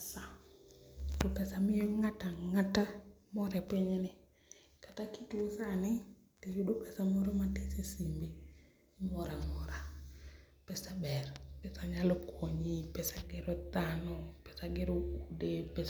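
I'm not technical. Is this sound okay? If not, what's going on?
Yes, this sound is okay, and there's nothing going on that needs fixing.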